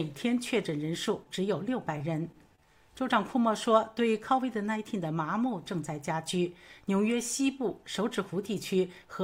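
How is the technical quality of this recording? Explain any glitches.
The recording has three short glitches from concealed packet loss, close together. They fall at 1.23 to 1.29 s, 1.98 to 2.02 s and 2.55 to 2.67 s. Each time, about 20 ms of audio arrived too late to decode. The receiver patched the gap by extending the preceding sound, then blended back into the real signal. Each event is heard as a brief smear or wobble. The third is the longest, stretching the sound by a few hundredths of a second.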